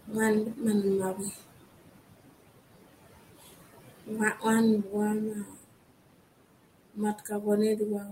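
Throughout the speech the background pumps: the room noise, sitting about 11 dB below the voice, sinks away in the gaps and swells back under each phrase. These are noise suppressor artifacts. The suppressor estimates the steady noise in each frequency band and pulls those bands down frame by frame, by about 20 dB here.

The same processing also takes bits of the speech with the noise. From 0.07 to 1.42 s, parts of the speech go faint or swallowed, adding up to roughly 400 ms and dipping by as much as about 14 dB. A brief dip of about 12 dB comes at 3.41 to 3.51 s. Between 4.06 and 5.76 s around half a second is pushed down, by up to about 21 dB. From 6.94 s to the end, the speech drops by up to about 20 dB. This is speech cut by the noise suppressor: those quieter stretches looked enough like noise for their gain to be turned down with it.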